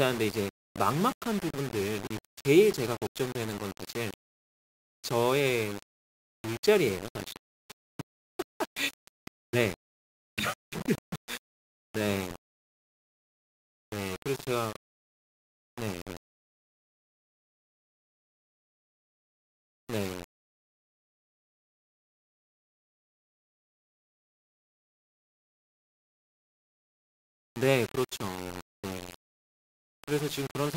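From start to finish the speech carries a grainy, rasping distortion whose texture shifts with every syllable, and the quietest passages and word tails break up into sputtering or drop out to silence. The likely cause is low bit depth without dither: samples rounded to roughly 5 bits with no dither, leaving an error that tracks the signal rather than forming steady hiss, sitting only around 15 dB below the speech.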